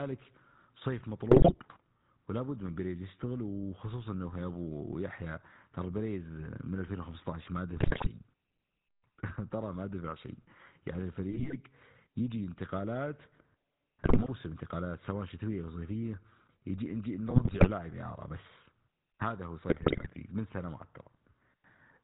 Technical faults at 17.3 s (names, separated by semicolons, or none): GSM full-rate codec; GSM bit errors